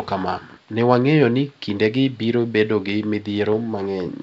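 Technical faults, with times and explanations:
Nothing goes wrong in this one: the speech sits well above a quiet room background about 37 dB down, and the G.722 wideband telephone coding at 64 kbit/s leaves at most a faint trace.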